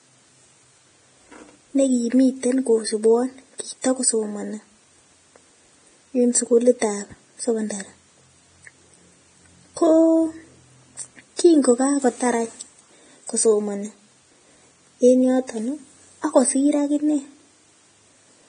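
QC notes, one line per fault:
Throughout: Vorbis compression, likely the cause of the damage. Nothing reaches above 9.7 kHz, so the speech sounds dull. The remaining treble is hissy and grainy, with rough tones and blurred consonants. The heavy damage fits a low bitrate, around 24 kbps.
3.82–3.84 s: pre-echo, just after "negimiten kosubwon". A short hiss of about 26 ms comes before a sharp attack. The codec spread its quantisation noise across the whole block, so noise meant for the loud onset fills the quiet gap and smears the attack.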